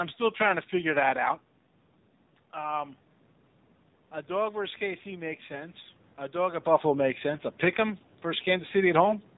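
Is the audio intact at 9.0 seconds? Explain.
No. From 9.01 to 9.14 s, the sound turns hoarse, scratchy and gargly. These are AMR bit errors. On a weak link, around two percent of the less protected bits in each frame arrived flipped. The checks on the key bits still passed. So the decoder placed its excitation pulses wrongly and used slightly wrong pitch, gain and spectral values. Pitch and level hold roughly steady while the texture breaks up.

Underneath, the AMR narrowband mobile codec runs throughout at 7.4 kbps. Nothing above 4 kHz survives, so the sound is band-limited and dull. At this low rate the vocal-tract model is driven by only a few pulses per 5 ms subframe. That makes the voice plainly buzzy and synthetic, and room noise behind it takes on a swirling warble.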